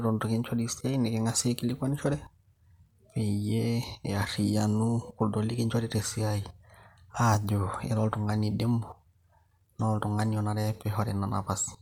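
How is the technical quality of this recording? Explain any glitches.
No glitches can be heard here, and the speech signal comes through without any technical faults.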